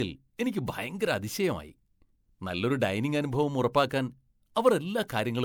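Generation loss runs throughout this speech, likely from roughly four rounds of MP3 re-encoding at 128 kbit/s. It sounds swirlier, more hollow and smeared than a single pass at that rate would.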